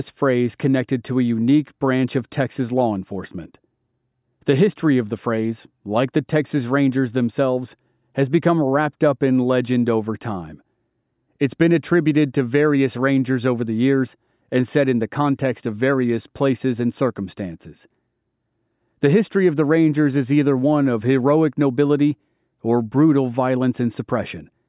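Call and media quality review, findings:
No faults found in the speech recording. Nothing heard that needs a ticket against any component in the path.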